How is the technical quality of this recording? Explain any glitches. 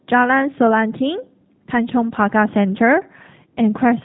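The technical quality is limited by low-bitrate voice coding across the whole clip. G.729 codec damage is plainly audible from start to finish. Each 10 ms frame is rebuilt from a vocal tract filter, a pitch predictor and a few pulses, which fits an 8 kbit/s stream. The result is rough, slightly synthetic speech with no content above 3.8 kHz.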